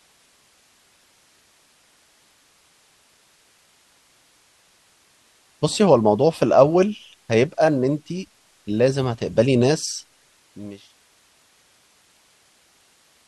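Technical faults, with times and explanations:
Nothing stood out on listening to this speech clip beyond a smooth fade-out that begins at about 9.5 s and ends at 10.98 s.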